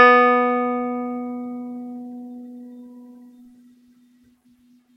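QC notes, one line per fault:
No faults found in the music. Nothing in it needs a timed entry.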